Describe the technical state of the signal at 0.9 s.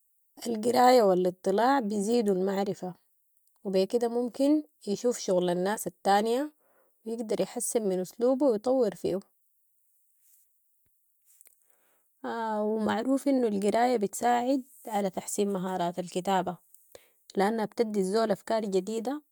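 At 0.9 s the speech signal is intact, with no audible technical fault at that moment.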